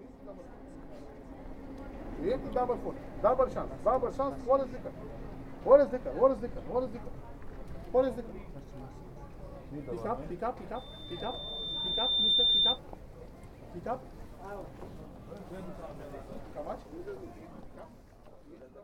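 Loudspeaker feedback squeal runs from 10.75 to 12.79 s. A microphone is picking up its own loudspeaker, and the loop gain at 3.6 kHz passes unity. That tone swells over roughly a second and a half into a piercing whistle standing about 10 dB above the sound.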